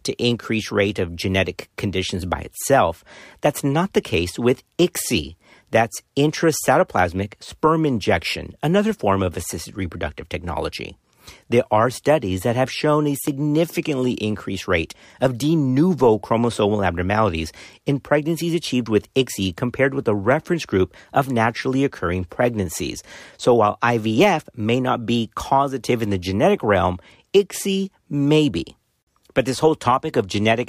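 Speech, with a single loud pop at 13.27 to 13.30 s, right after "that have shown a", which jumps out at roughly 10 dB above the talker while the speech carries on underneath. It's likely a voltage spike from a plug, switch, static or driver glitch.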